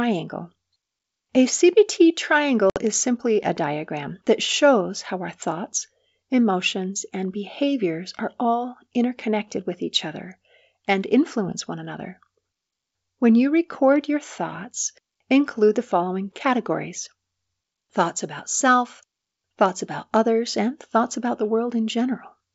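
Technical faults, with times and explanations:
2.70–2.78 s, packet loss on an ADPCM call: a few packets go missing, leaving a hard-edged 60 ms silent hole. The decoder's adaptive predictor and step size then drift from the sender's, so speech resumes slightly distorted.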